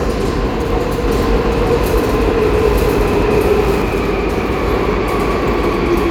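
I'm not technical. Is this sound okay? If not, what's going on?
No. From 1.08 to 3.82 s there is a doubled audio track. The same sound plays twice, the second copy about a second later and just as loud. It starts and stops suddenly. It is likely a second recording path or an editing slip.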